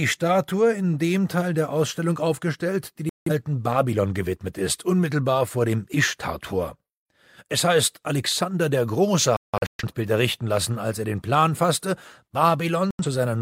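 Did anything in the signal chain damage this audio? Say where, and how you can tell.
Yes. The damage happened at reception: a digital broadcast dropout, heard three times. The sound mutes from 3.09 to 3.31 s, losing 170 ms. From 9.37 to 9.84 s it breaks into several short holes totalling 340 ms, the longest 170 ms. From 12.91 to 13.05 s, 85 ms vanishes. The receiver muted whenever frames failed to decode, and every gap fits whole frames of about 43 ms. Whatever was sent during the gaps is lost.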